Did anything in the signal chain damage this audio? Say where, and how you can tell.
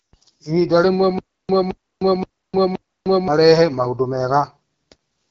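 Yes, at two stages. The codec stage is AMR wideband (HD Voice) throughout the clip. The speech sounds rough and raspy across its whole length. That plainly audible roughness fits one of AMR-WB's two lowest modes, most plausibly 8.85 kbit/s. At that rate the pulse-driven vocal tract model has too few bits to describe the excitation accurately. The band from 6.4 to 7 kHz is also filled only with shaped noise, which adds hiss-like texture above the coded speech.

The second fault is a stutter with silent gaps, most likely from a playback or stream buffer that stalled and retried. From 1.19 s to 3.28 s, the same 218 ms fragment of speech repeats four times. Each repeat is followed by about 305 ms of digital silence, giving an even 523 ms cycle. The speech that should have filled that span is missing, so it resumes at 3.28 s with a section lost.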